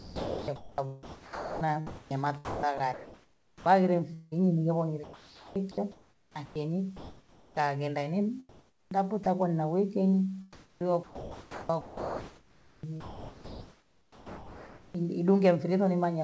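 The speech turns choppy from 0.0 to 4.34 s, 5.04 to 7.68 s, 8.49 to 9.26 s and 10.53 to 15.05 s, with syllable edges dropping into a flat synthetic hiss. This is sound chopped by the voice detector, which likely cut about 2.6, 1.7, 0.44 and 3.9 s and filled them with comfort noise above a low room noise floor.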